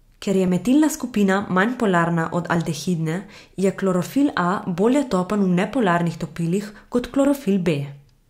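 From 0.48 s to 6.7 s, about four short clicks recur every 2.08 s through the speech. These are clock drift buffer slips, likely from two devices on separate clocks drifting a few hundred ppm apart, so a few dozen samples are periodically dropped or repeated. The strict regularity distinguishes them from random dropouts.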